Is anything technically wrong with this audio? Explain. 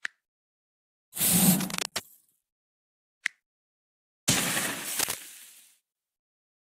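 Yes. There are two kinds of fault.

Cable scratch noise occurs twice, from 1.58 to 2.05 s and from 4.99 to 5.15 s. Dense, uneven bursts of crackle ride on top of the sound. The first burst sits roughly 10 dB below the signal. The second is louder, at about the level of the signal itself. The likely cause is a worn cable, connector or control being moved. Its contact resistance then jumps about rapidly and adds this scratchy rustle.

A gap between stream segments cuts the sound from 1.89 to 1.92 s, inside the first scratch. It is a hole of about 24 ms with hard edges. The timing of two adjacent stream segments leaves a small space, and the player fills it with silence. The sound then resumes where it stopped, just slightly late. The spacing fits segments about 2 s long.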